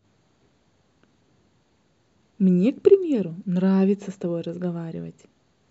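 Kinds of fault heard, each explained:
No kinds of fault are heard in this speech.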